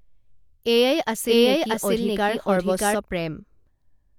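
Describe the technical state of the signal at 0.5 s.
At 0.5 s the speech signal is intact, with no audible technical fault at that moment.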